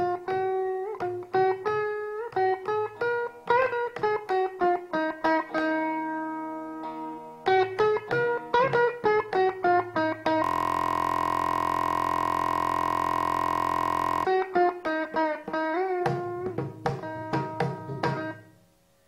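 At 10.44 s the system stalls into a system hang loop: the computer or its audio driver freezes, but the sound hardware keeps replaying the last ring buffer it was given. The same 23.22 ms slice of audio then repeats exactly, well over a hundred times, which fits a 1024-sample buffer. Because the loop is so short, it fuses into a steady, flat buzz at about 43.1 Hz that holds until 14.25 s.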